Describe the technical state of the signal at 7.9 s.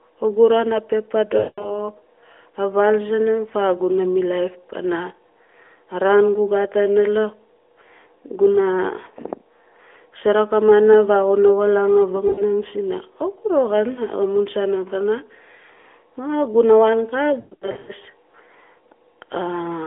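At 7.9 s the speech is intact, with no fault, only the band-limited narrowband sound of the AMR mobile codec path carrying it.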